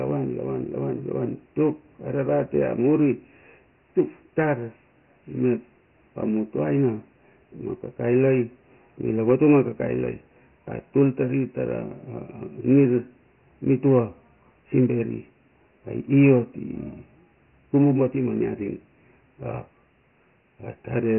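Speech, carrying Dialogic VOX ADPCM coding for its whole length: nothing survives above 3 kHz, which fits 4-bit samples at 6,000 a second, and heavy grainy hiss trails the voice. A spectrogram shows a flat ceiling at 3 kHz with speckled noise following the speech.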